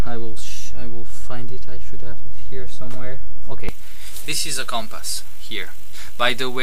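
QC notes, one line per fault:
3.69–6.63 s, pre-emphasis left on: a treble boost, consistent with a J.17 curve, was never followed by its matching de-emphasis. At 10 kHz the top end sits about 11 dB above 1 kHz, so the sound turns thin, bright and sibilant.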